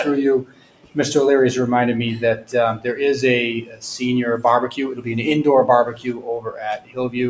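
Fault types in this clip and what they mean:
noise suppressor applied to music or sounds: A suppressor tuned for speech stayed on, so anything steady, like held tones, room ambience or reverb tails, gets read as noise and pulled down, with the level swinging by roughly 15 dB. Attacks punch through and then the sustain sinks, which gives the whole clip a pumping, fluttery, thinned-out feel. The call path's band limit, with nothing above 8 kHz, is just how the line is built.
sound cut by the noise suppressor: These are the moments where the suppressor bites hardest, dragging the sound down by about 9 to 16 dB. You hear it at 0.41–0.97 s, 2.37–2.54 s, 3.62–3.83 s, 5.91–6.28 s, 6.44–6.60 s and 6.77–6.98 s. The longest dips run close to half a second. Sustained or decaying parts drop away or get their tails clipped short, while sharp onsets mostly survive.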